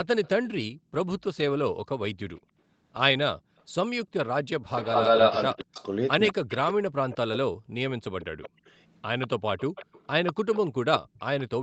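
From 0.23 to 0.48 s a faint echo leak appears: a copy of the speech trailing by 194 ms, very far down, probably residue the far end's echo canceller likely failed to remove from its loudspeaker pickup. A true echo repeats the sound itself, whereas gating only silences the room.

At 0.73 to 0.92 s, 2.4 to 2.58 s and 3.39 to 3.59 s the background is gated by the echo canceller. The room tone drops by about 40, 29 and 38 dB for roughly a fifth of a second each time, then returns. The speech itself stays intact, and nothing is repeated.

From 4.63 to 6.57 s the echo leak returns much more strongly. The delayed copy, again 194 ms behind, is about as loud as the speech or louder, so it reads as a second voice rather than reverberation.

Overlapping it, from 5.49 to 8.61 s, the speech is suppressed in double talk. With both sides active, the canceller likely pulls the talker down by as much as about 40 dB, in pieces totalling around two seconds. 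This is unlike gating, because the voice itself dips, not just the background.

From 8.22 to 11.44 s a moderate echo leak continues, the 194 ms copy sitting below the speech.

The band stops at 8 kHz throughout, which fits the Opus call path at 24 kbps.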